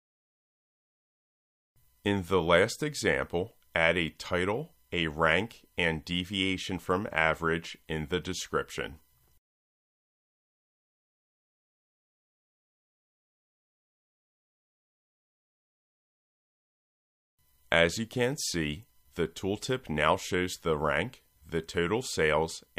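No technical faults can be heard anywhere in this audio.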